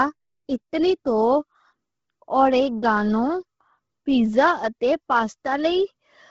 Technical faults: Bluetooth LC3 compression

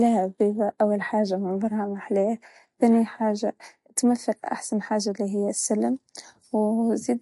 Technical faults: MP3 compression

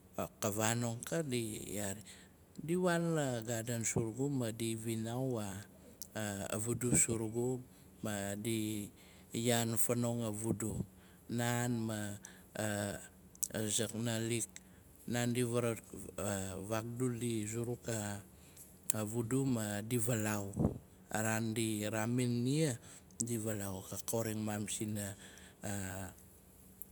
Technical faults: none

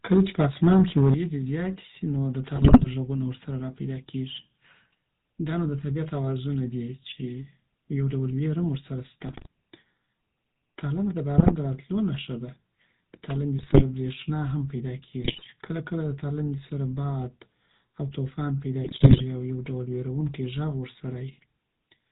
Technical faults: GSM full-rate codec; microphone overload; microphone volume stepped down; GSM bit errors

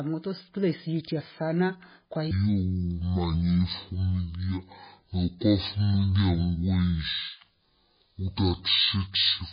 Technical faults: MP3 compression; section at the wrong speed

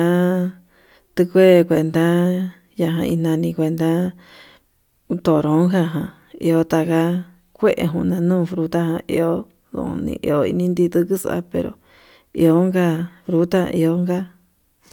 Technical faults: none

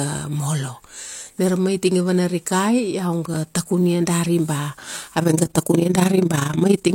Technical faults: processor overload crackle; overlap-add ripple

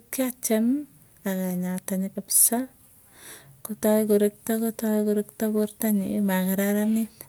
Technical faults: none

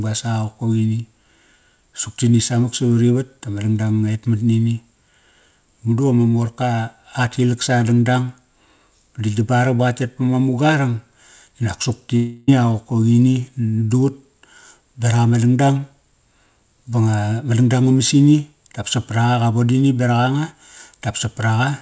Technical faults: long network dropout

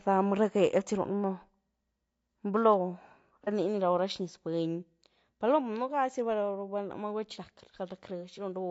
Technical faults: low-delay AAC compression; AAC frame loss with concealment

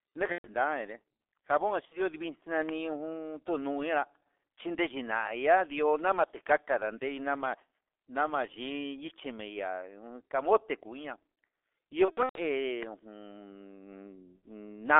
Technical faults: G.723.1 codec; VoIP packet loss concealed by the speech codec; loud pop

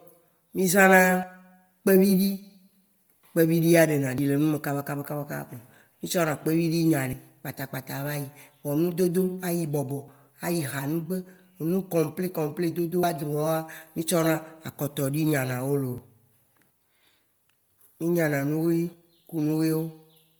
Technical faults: Bluetooth LC3 compression; audio missing between chunks

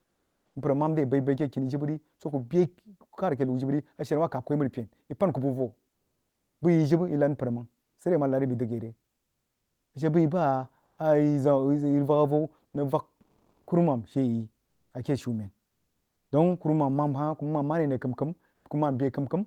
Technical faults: comfort noise in place of the background

